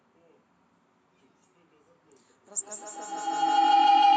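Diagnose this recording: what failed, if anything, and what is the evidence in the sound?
A tone near 700 Hz rises out of the speech from 2.46 s, pulsing roughly every 150 ms and climbing to about 26 dB above the voice until the clip ends. This is feedback howl at the call stage: an acoustic loop gaining level on each pass.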